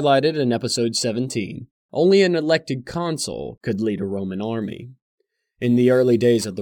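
From 4.62 s to the end at 6.61 s, a gritty, inharmonic fizz rides the speech: crude rate conversion, samples simply dropped without filtering, consistent with 48 kHz to 44.1 kHz.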